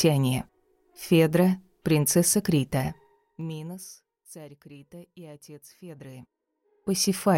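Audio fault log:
2.73–4.01 s, zipper noise: a rapid ticking rides on the sound as it fades down by about 25 dB. The gain falls in unsmoothed 2 dB jumps, around ten a second, and each jump leaves a small click.
5.72–7.25 s, zipper noise: the same zipping returns as the level climbs back by about 25 dB. Here the steps are 1 dB at a similar rate, so the clicks are finer, but the rise is still stepped rather than a continuous ramp.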